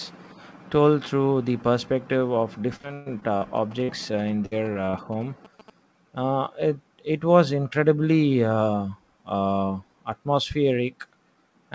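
Repeated packet loss (robotic sound) runs from 2.76 to 3.43 s. Six gaps open in quick succession, the longest 123 ms, and each is bridged by extending the previous sound, so 38% of that stretch is patched audio. The speech turns choppy, with fragments missing.

GSM signalling bursts begin at 3.57 s and last until 5.70 s. A nearby 2G phone exchanging signalling traffic is picked up and rectified by the audio circuitry, producing a galloping dit-dit-dit of short 217 Hz buzzes about 20 dB below the speech.

A burst of packet loss falls at 3.83 to 3.90 s, beneath the buzzing. A block of about 60 ms never arrived in time, and the receiver held and faded the last sound for 51 ms before jumping ahead, so a brief buzz or hiss replaces the lost piece.

Repeated packet loss (robotic sound) returns from 4.46 to 4.95 s, with four gaps, the longest 54 ms. Concealment fills 23% of this span, giving a lighter but still robotic, stuttering texture.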